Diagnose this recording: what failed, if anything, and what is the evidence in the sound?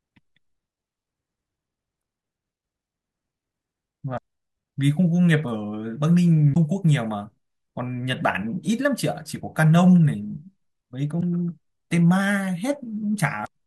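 Codec stage: damaged data in a compressed stream, heard as short glitches at 1.98–2.01, 4.14–4.18, 6.52–6.57, 11.17–11.21 and 13.43–13.48 s. The decoder misreads frames and resyncs, leaving brief chirps, clicks or holes and abrupt waveform breaks.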